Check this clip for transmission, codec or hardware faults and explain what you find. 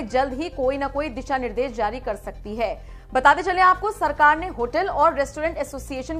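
No transmission or hardware faults are audible here.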